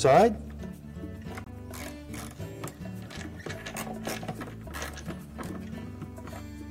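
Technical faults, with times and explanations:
1.44 to 1.50 s, corrupt frame muted: bit errors in the compressed stream made the decoder reject a run of frames, and the player substituted silence. The sound cuts off abruptly for 53 ms, which fits four short frames, then resumes with timing intact.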